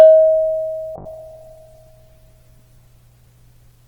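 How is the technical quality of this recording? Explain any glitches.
Quality is hurt by one problem near the start. From about 0.97 s to the end there's a call bitrate drop: the encoder got far fewer bits and cut off the highs, so the sound turns rough and muffled. That fits roughly 64 kbps falling to about 11 kbps, bottoming out for 1.56 s.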